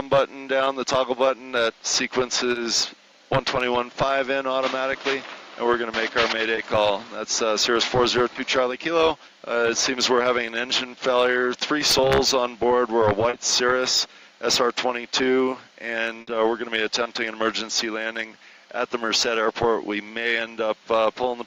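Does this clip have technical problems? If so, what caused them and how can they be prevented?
Yes. Short concealed packet loss occurs at 2.51 to 2.57 s, 6.55 to 6.59 s, 8.33 to 8.37 s, 13.29 to 13.35 s and 17.03 to 17.07 s. In each case 20 or 40 ms of audio arrived too late or not at all, and the receiver papered over the gap by extending the preceding sound before crossfading back into the real signal. Each one is heard as a brief smear or wobble, and any very short sound there can vanish.

A burst of packet loss occurs at 16.21 to 16.29 s, where about 60 ms went missing in one run. The receiver kept extending the last sound across the whole gap, letting it sag in level as it went, so it comes across as a held buzz or fading hiss. The audio then picks up further along, and that stretch is simply missing.

Both can be prevented by giving the call a steadier network path and enabling forward error correction or a larger jitter buffer.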